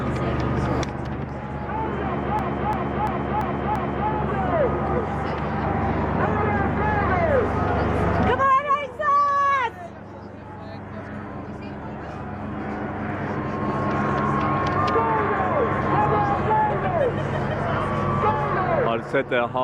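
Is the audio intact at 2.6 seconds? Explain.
No. A system hang loop runs from 2.39 to 4.10 s. The hardware kept replaying one 341 ms stretch, five times at about 2.9 Hz, which fits a 16384-sample buffer, giving a slow stutter. Unlike a dropout, each repeat is identical and almost no audio goes missing.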